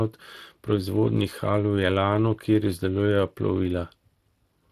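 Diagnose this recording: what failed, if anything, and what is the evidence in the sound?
The codec stage failed: Speex codec damage is plainly audible for the whole speech clip. The excitation is coarsely coded, leaving the speech hoarse and noisy. The content above 8 kHz is a shaped, noise-like fill that stops near 15.3 kHz. This is consistent with roughly 22 kbps Speex.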